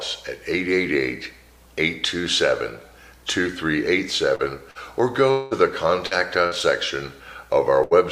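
Short concealed packet loss at 4.35–4.42 s and again at 4.71–4.78 s: each time about 40 ms of audio failed to reach the decoder in time, and the receiver bridged the hole with roughly 37 ms of synthesised continuation before blending back into the real signal. Both spots come across as a quick smear or wobble, the preceding sound briefly stretched and wavering rather than cleanly broken.

At 5.31–5.54 s the sound is held and extended for about 200 ms, with the carried-over tone or hiss fading rather than dropping to silence, then the audio picks up further along with that stretch gone. This is likely a long network dropout: no packets arrived for around a fifth of a second, and concealment covered the whole gap, so no true silence appears before playback resumes.

Short concealed packet loss returns at 6.07–6.14 s, again about 40 ms missing and just under 40 ms filled, giving the same brief wobble.

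A burst of packet loss follows at 6.47–6.54 s, where about 40 ms went missing and was covered by roughly 46 ms of continuation, and another at 7.83–7.94 s, where about 80 ms was lost and some 75 ms filled. In each, the last sound is prolonged and turned down as the gap runs, becoming a held buzz or fading hiss, and the audio then resumes past the missing part. The later burst is longer.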